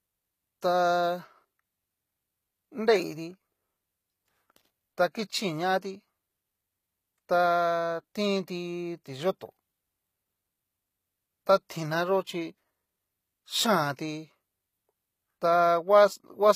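Throughout, the treble sounds bright yet synthetic, with gritty, lispy s sounds, likely from HE-AAC compression at a rate fitting about 20 kbps. A spectrogram shows copied, smeared upper bands, misaligned harmonics above the crossover, and nothing above 14.9 kHz.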